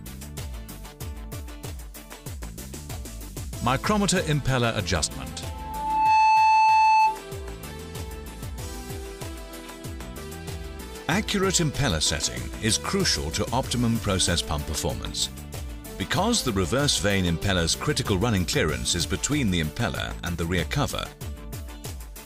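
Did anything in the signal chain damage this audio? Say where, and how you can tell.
Yes. At playback, the loudspeaker looped into its own microphone, causing loudspeaker feedback squeal: an 874 Hz tone swelling to about 10 dB above the sound from 5.43 to 7.25 s.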